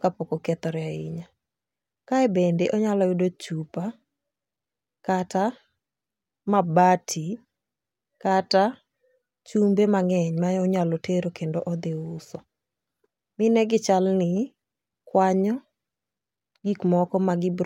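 A recording of speech in which no technical fault can be heard anywhere in the signal.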